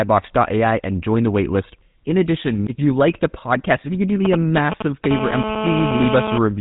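Speech coming through a narrow, gravelly channel, and the whole thing carries the signature of the GSM full-rate codec. Nothing gets through above about 3.8 kHz, so the top end is gone, and the voice has that buzzy, rough texture you get when a coder models the vocal tract and rebuilds the excitation from a sparse train of pulses instead of the real waveform. The damage is plainly audible, and the sound fits the old 13 kbps full-rate coder. Then a nearby 2G handset leaks in twice. From 4.25 to 5.06 s there are GSM signalling bursts: a galloping dit-dit-dit of short buzzes at a burst rate of 216.7 Hz, sitting at roughly 5 dB below the speech. That's the sound of the phone firing off brief groups of radio bursts while it's signalling, which the audio circuitry rectifies into audible clicks. Right after, from 5.11 to 6.38 s, it turns into continuous GSM phone buzz, a hard, raspy 217 Hz tone with lots of harmonics at about 4 dB below the speech. 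It stays nearly steady, which is what you hear once the phone is actually in a call and transmitting its bursts 217 times a second. The buzz has nothing to do with the speech itself, it's pure RF pickup.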